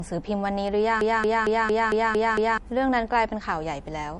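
Throughout the speech, the audio was likely encoded first as a low-bitrate MP3 and then re-saved at a high bitrate, so this is low-bitrate audio saved at a high bitrate. Nothing sounds above 11.2 kHz, which fits an original near 48 kbit/s. The first encoding's dull, smeared quality remains, because the larger second file cannot restore what was discarded.

From 1.01 s to 2.58 s, the player or stream likely stalled and kept resending the last fragment it held, producing a broken-record loop. A 0.23 s piece repeats exactly seven times, back to back, as a rigid mechanical stutter, and the speech belonging to that stretch is lost.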